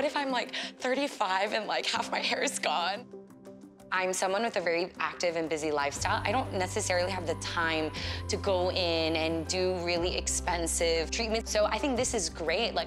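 Nothing technically wrong can be heard in the audio. There is no fault to place at any time and none to trace to a cause.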